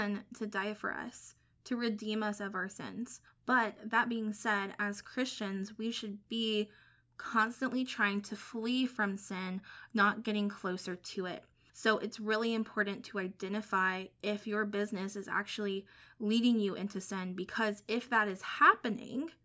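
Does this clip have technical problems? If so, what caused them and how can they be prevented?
No, the signal shows no technical faults, so nothing here needs a cause or a prevention step.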